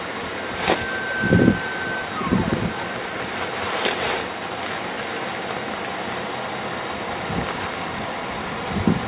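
From 2.54 s to 7.67 s a train of clicks runs over the sound: around thirty pulses of much the same shape, about 5.3 per second on average but unevenly spaced, each standing out roughly 10 dB above the audio. They tick through the pauses too, which separates them from call-path glitches tied to the signal. The likely source is interference from nearby equipment or a faulty connection or power supply. The bandwidth stops at 4 kHz, which fits G.711 mu-law.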